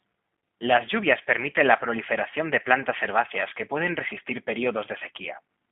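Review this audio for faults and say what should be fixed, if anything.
Throughout the clip the speech sounds thin, slightly rough and synthetic, confined to roughly 150 Hz to 3.5 kHz. That is G.729 codec damage: the voice is rebuilt from a vocal tract filter, pitch predictor and sparse pulses, at a rate that fits 8 kbit/s. To prevent it, capture or route the call through a wideband codec such as G.722 or Opus instead of G.729.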